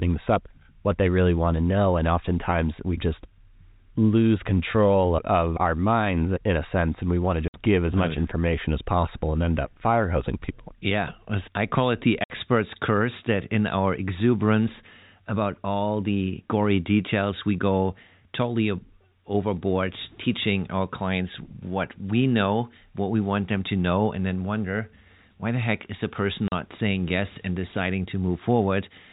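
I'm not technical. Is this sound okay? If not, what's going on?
No. The speech has three short dropouts, a fault called packet loss filled with silence. Small chunks of audio never arrived, and the receiver played nothing in their place. The gaps come at 7.48 s (after "and we want to"), at 12.24 s (after "I call it the"), both 60 ms long, and at 26.48 s (after "heck is the person"), 40 ms long. Their lengths point to 20-millisecond packets. Each gap starts and stops abruptly. The narrow telephone-style sound comes from G.711 coding.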